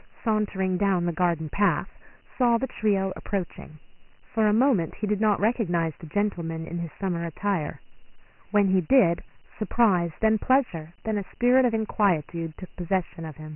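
A gritty hiss trails the speech throughout, with nothing above 3 kHz: heavy Dialogic VOX ADPCM damage, 4-bit coding at 24 kbps, which fits a 6,000-sample rate.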